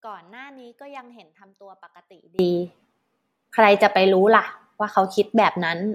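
Speech, with an audio dropout to a faint residue already under way when the clip opens and lasting until 2.39 s. Only a faint sound sits roughly 30 dB down, likely from a signal path that stayed live after the break. The abrupt return, rather than a fade-in, separates it from a pause.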